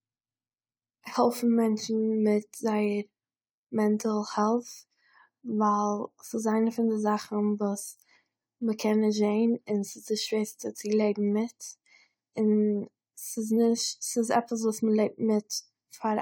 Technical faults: none

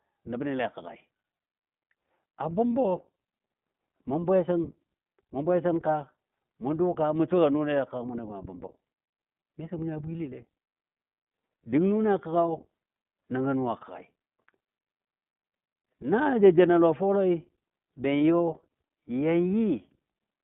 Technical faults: iLBC codec; lost iLBC frames

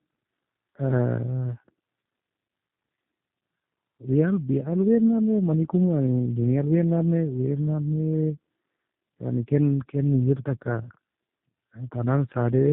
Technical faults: tandem speech coding

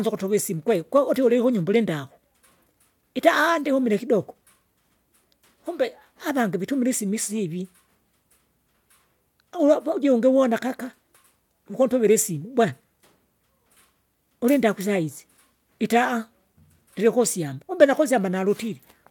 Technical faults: none

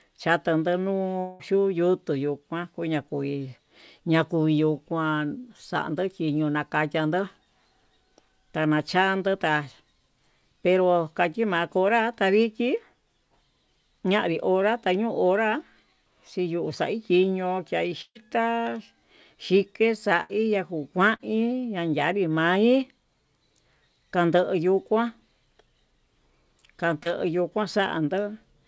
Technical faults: long network dropout; burst of packet loss; short concealed packet loss

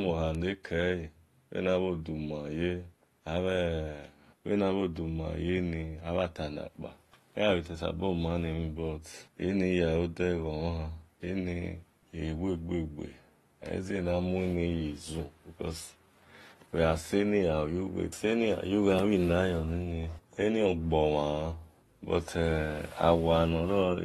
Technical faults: AAC compression; bit error spike

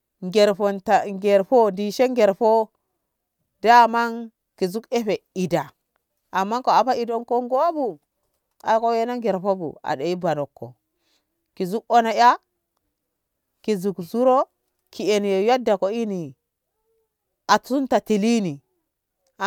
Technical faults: none

